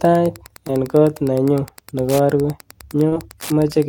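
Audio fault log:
Throughout, Wi-Fi interference: a steady ticking runs under the speech at about ten ticks a second, sitting roughly 25 dB below the speech. A nearby Wi-Fi radio transmits a beacon every 102.4 ms, and some part of the audio circuit picks up that radio energy and rectifies it into the signal path. Each beacon lands as a short click, so the regular transmission schedule becomes this metronome-like pattern in the audio.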